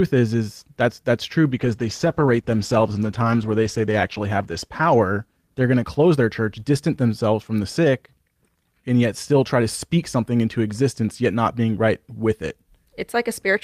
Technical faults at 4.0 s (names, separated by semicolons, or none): call bitrate drop